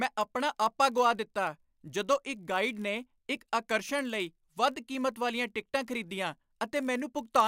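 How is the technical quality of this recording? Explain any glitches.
The recording has a fault that runs through the whole speech clip: a block size mismatch (padded). A steady buzz at about 46.9 Hz sits under the speech from start to finish. Each block handed to the next stage is slightly short, and the missing tail is filled with zeros, so a tiny silent gap recurs at the block rate. The rate fits a 1024-sample block. The gaps stretch the timing only negligibly, to 0.999 of normal speed.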